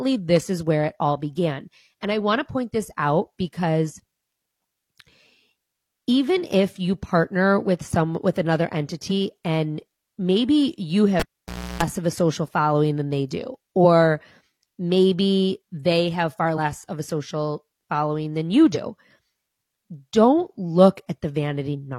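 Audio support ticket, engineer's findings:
Short glitches breaking through the speech at 9.07–9.12 s, 13.80 s, 16.53–16.59 s, 18.71–18.76 s and 21.70–21.75 s, each around 50 ms or less. Cause: damaged data in the compressed stream. Corrupted or lost bytes make the decoder misread frames, lose sync and hunt for the next frame header. Check the transport or storage path feeding the decoder.

Pop at 11.20 s, then near silence, then a 60 Hz mains buzz of about 0.33 s, then a second pop as the audio returns at 11.83 s. The signal is out for about 0.58 s in total. Cause: a live cable pulled and plugged back in. The buzz is the plug tip touching before the ground connects. Check the connector and jack for looseness or handling.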